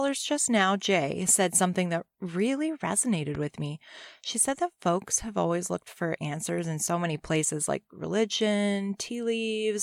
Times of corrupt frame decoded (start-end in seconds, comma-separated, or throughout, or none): none